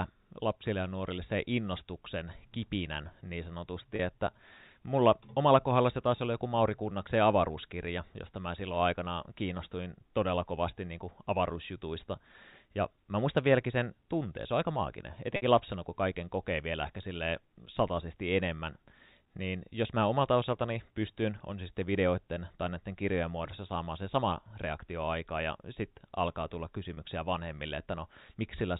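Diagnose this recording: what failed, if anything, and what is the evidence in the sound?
Network packet loss with pitch repetition on the G.711 call: short buzzy held sounds at 3.96–3.99 s after "se innostuksen kipinän niin", 15.36–15.42 s after "se on aika maaginen", and 26.94–26.97 s after "ja sitten alkaa tulla". The receiver looped the last pitch period to bridge gaps of 30, 60 and 30 ms.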